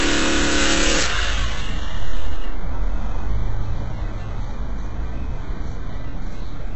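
From start to finish the audio shows HE-AAC compression damage, likely from a very low bitrate near 8 kbps. The treble is rebuilt from copied lower bands, so it sounds gritty and metallic. Even so, nothing reaches above 8 kHz.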